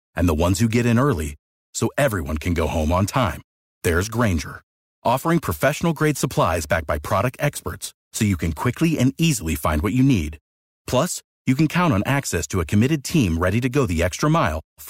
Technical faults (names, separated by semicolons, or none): crude rate conversion